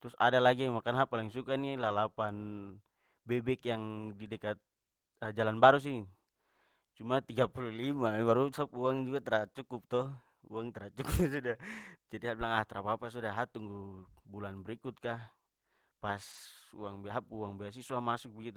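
At 1.81–1.91 s, just after "sa paling suka nih", a lost packet rebuilt from error correction produces a brief rough, noisy patch of about 60 ms. Shorter 20 ms patches follow at 3.75–3.77 s, just before "di dekat", then at 8.85 s, 11.17–11.19 s, and 17.43–17.45 s, with a 40 ms patch at 16.31–16.37 s. Each patch is a low-bitrate copy carried in the next packet, so no gap or smeared, stretched repeat is heard.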